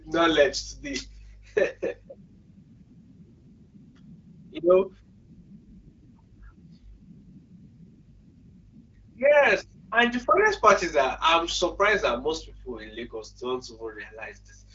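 Speech via AMR wideband codec; no faults are audible.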